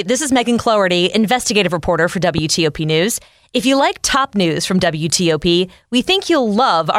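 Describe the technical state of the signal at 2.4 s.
A sudden voltage pulse, likely from a switch, plug or static discharge, enters the signal path between 2.38 and 2.40 s, right after "investigative reporter for". It is heard as a single sharp loud pop, about 10 dB above the speech, which continues underneath.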